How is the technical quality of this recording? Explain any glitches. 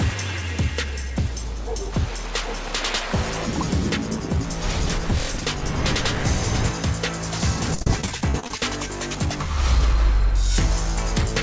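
The recording carries one clear glitch, and its audio stops at 8 kHz, which fits a wideband call codec such as G.722 at 64 kbps.

From 7.75 to 8.59 s there is repeated packet loss, giving a robotic sound. More than a dozen short holes, the longest 42 ms, were each patched by extending the preceding sound, so about a third of that stretch is concealment. The result is choppy audio with fragments missing.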